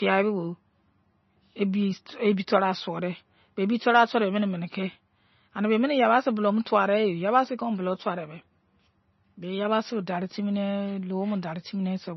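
Throughout the speech, the sound is dull and watery, with nothing above about 5.9 kHz. Heavy MP3 compression is the likely cause, at a low bitrate near 24 kbps. Weak frequency detail flickers between frames, so s sounds swirl and consonants smear.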